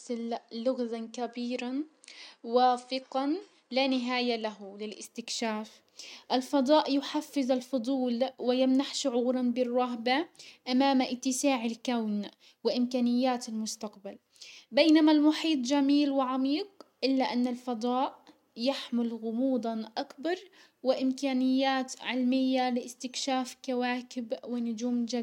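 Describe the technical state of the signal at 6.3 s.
At 6.3 s the speech signal is intact, with no audible technical fault at that point.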